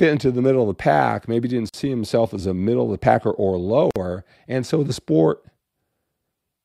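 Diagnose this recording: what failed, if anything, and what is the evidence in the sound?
The failure is at the codec stage: separately encoded pieces were joined untrimmed, leaving each run's start-up delay and last-frame padding as gaps at a join of encoded pieces. The speech drops out for 45 ms at 1.69 s, after "the pack maybe didn't", and for 51 ms at 3.91 s, after "of the packer or", then resumes where it stopped.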